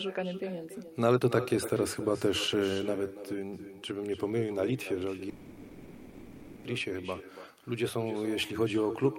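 Throughout the speech an echo with no canceller is present. Each phrase is followed about a third of a second later by a quieter copy, about 11 dB down, and the copy is thinner than the original. The far end is playing the call on a loudspeaker. Its microphone catches that sound and sends it back. Nothing there removes it, so the talker hears their own speech return after the network round trip.

From 5.29 to 6.66 s there is a call audio freeze. The last sound is stretched into a fading fill for about 1.35 s, with no true silence. Speech then resumes from where it stopped, and nothing is missing. The likely cause is packets held up in transit, so the jitter buffer ran empty. The receiver filled the wait, and everything after it now arrives about 1.35 s later.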